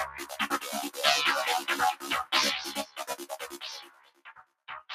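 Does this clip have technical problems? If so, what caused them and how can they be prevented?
Yes. A speech-oriented noise suppressor stayed active on non-speech sound, treating steady content as noise. Its gain swings by roughly 15 dB, so the audio pumps and thins throughout.

The same noise suppressor turned sound down at 0.06–0.34 s, 2.87–3.03 s and 3.8–4.52 s. Sustained parts there sank by about 8, 8 and 10 dB, with decays cut short.

To prevent both, bypass speech noise suppression whenever the input is music or general sound rather than voice.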